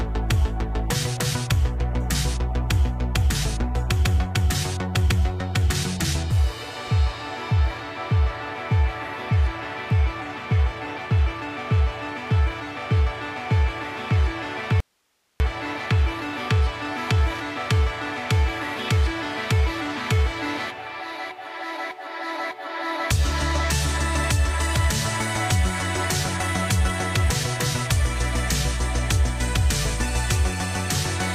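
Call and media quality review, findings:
Audio dropout to a faint residue, 14.80 to 15.40 s: signal cuts abruptly for 0.6 s, leaving only hiss about 45 dB below normal level, then snaps back. Likely an upstream capture or transport interruption while the downstream path stayed live, passing its noise floor.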